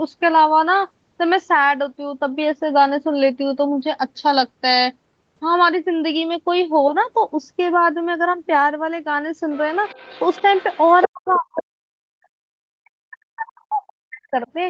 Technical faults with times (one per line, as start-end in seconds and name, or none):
9.53-9.59 other side's voice leaking through
9.85-11.62 other side's voice leaking through
11.07-14.48 speech suppressed in double talk